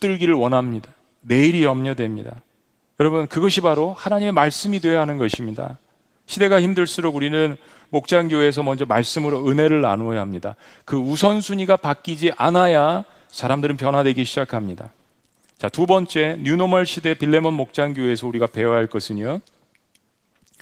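A loud pop lands at 5.34 to 5.36 s: a single sharp click, peaking roughly 10 dB above the speech, with the speech carrying on underneath it. It was likely caused by a sudden step or pulse of voltage entering the signal chain, such as a connector being disturbed, a switch, a static discharge or a driver glitch, which the following circuits shaped into a brief pulse. The Opus voice compression stays light throughout.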